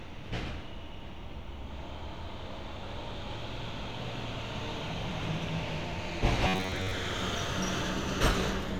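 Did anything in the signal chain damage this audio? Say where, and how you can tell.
Yes. From 6.47 to 6.91 s the sound turns into a rigid, metallic buzz pitched near 94 Hz, with most of that stretch made of repeats. This is robotic sound from repeated short buffers, likely a starved driver or buffer looping roughly 11 ms of audio while real input is skipped.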